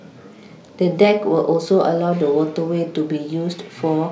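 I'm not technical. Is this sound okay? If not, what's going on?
Yes, this recording sounds fine from a technical point of view. There is no moment in it where anything goes wrong, so there is nothing you need to worry about or fix.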